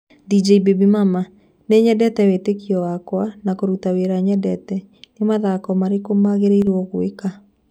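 A speech recording in which the level briefly sags from 6.62 to 6.67 s, a sudden dip of about 6 dB lasting roughly 50 ms before snapping back. The likely cause is one channel dropping out, so the mono sum momentarily carries only half the shared signal.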